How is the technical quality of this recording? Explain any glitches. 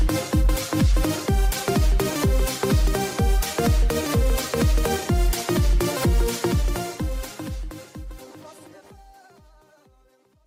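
No glitches or technical faults are audible in this recording.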